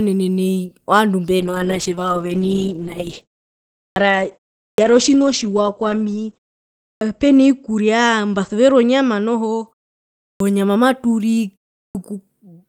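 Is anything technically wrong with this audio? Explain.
Yes, there are two problems: a call bitrate drop and clipped starts after pauses.

Call bitrate drop: from 1.41 s, just after "nai ovandu", until 9.73 s. The call's bandwidth estimate fell, so the encoder was forced onto far fewer bits, which fits a drop from roughly 32 kbps to about 9 kbps. It stays at its lowest for about 5.2 s. Coarser coding makes the speech rough and watery, and the audio band narrows from 20 kHz to 8 kHz, so the speech also sounds muffled until quality recovers.

Clipped start after a pause: at 3.83, 4.67, 6.89, 10.28 (right before "nyama maturii") and 11.82 s (right after it). Each follows a pause of 0.33 to 0.64 s. The output device drops into a low-power state during silence and needs time to wake or relock, so the first 110 to 130 ms of each new sound is lost. Onsets come in abruptly, with their initial sounds missing.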